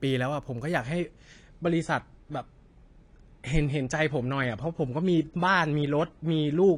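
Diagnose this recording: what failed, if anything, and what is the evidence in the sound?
At 0.81 s the speech abruptly loses its top end and stays that way to the end, with nothing above 10.2 kHz. Sibilants turn dull, and coding artefacts thicken, all without any gap or dropout at the transition. This is a network-stage fault: an adaptive stream at a lower bitrate. The player switched to a cheaper AAC rendition when throughput fell. The sudden band-limit fits a drop from roughly 96 to 32 kbit/s.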